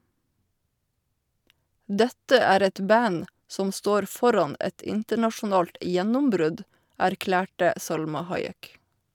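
No technical faults can be heard anywhere in the recording.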